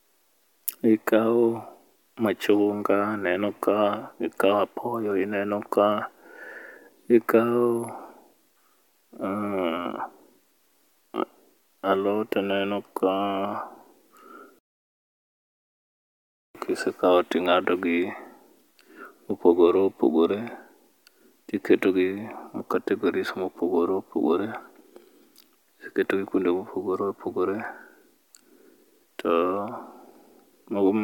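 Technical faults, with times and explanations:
No technical faults detected.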